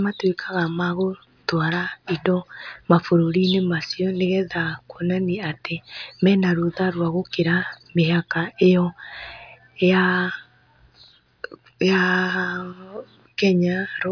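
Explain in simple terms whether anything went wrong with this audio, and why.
Nothing went wrong here: the speech comes across steady and even the whole way, with no breaks, glitches or odd sounds to point to.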